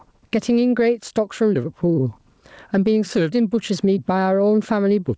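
A speech recording carried over a call, with its top end stopping at 8 kHz in a way that fits the G.722 codec. It has gain pumping throughout, with the level swinging by about 15 dB, so loud and quiet parts sit squashed close together. The likely cause is microphone gain set far too high, with a fast limiter or compressor clamping down on every peak. Clock drift between sender and receiver also runs through the whole clip, with the sender's clock running around 4 percent fast. This produces repeated timing corrections from 0.06 s to 5.14 s, small and unevenly spaced, as the receiver keeps trimming short pieces to keep up with audio arriving at 104 percent speed.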